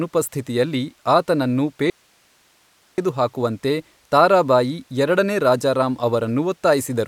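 At 1.9 s the speech cuts out abruptly and stays gone until 2.98 s, roughly 1.08 s, leaving only a thin hiss around 40 dB below the normal level before the speech snaps back mid-flow. There is no fade at either edge. This is an audio dropout to a faint residue, likely from the wanted signal being lost somewhere upstream while the stage after the break stayed live and passed its own noise floor.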